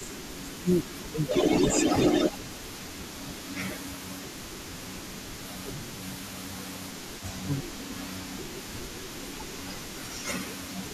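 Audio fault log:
0.0–1.34 s, 2.31–2.35 s, 3.08–6.58 s, 7.41–9.16 s, 10.09–10.83 s: speech suppressed in double talk. The speech sinks in pieces, by roughly 15 dB at worst (only about 5 dB in the brief 2.31 s dip), likely because the echo canceller ducks everything while both sides talk. Unlike a network dropout, the audio dips and recovers rather than vanishing outright.
Throughout: echo leak. A faint copy of the speech trails it by 376 ms, roughly 15 dB down, likely because a loudspeaker's output reached a microphone and the echo canceller failed to remove it. The distinct, repeating delay separates it from room reverberation, which smears rather than repeats.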